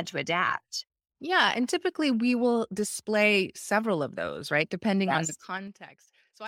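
A speech recording with zipper noise from 5.22 to 5.82 s, just after "yes on". The level drops by about 20 dB in coarse steps of about 3 dB, at roughly ten steps per second rather than along a continuous curve. Each jump puts a small click into the waveform, so a ticking, zipping texture rides on the speech while the gain falls.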